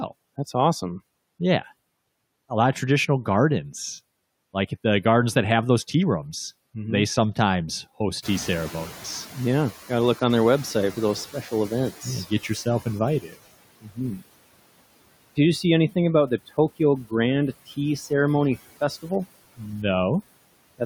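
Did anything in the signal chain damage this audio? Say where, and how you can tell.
Yes, in the call-processing stage. Throughout the clip the background sinks between phrases and swells back under the speech. These are noise suppressor artifacts: band-by-band gain cuts of about 20 dB, applied frame by frame.

When the room noise jumps by about 18 dB near 8 s, the noise comes through louder from 8.22 s and then fades gradually until 13.17 s. This is the noise suppressor catching up. Its noise estimate lagged the rise and took about 4.95 s to settle, with a cut of about 13 dB.

Just after that, at 13.21 to 13.4 s and 13.81 to 14.0 s, short stretches of speech sound swallowed and faint, dropping by up to about 22 dB and about 18 dB. This is speech cut by the noise suppressor, which took those quieter parts of the speech for noise and turned them down with the background.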